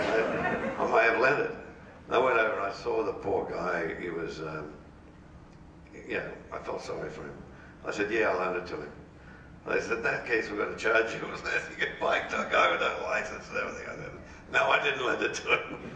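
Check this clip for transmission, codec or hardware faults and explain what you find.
No transmission, codec or hardware faults.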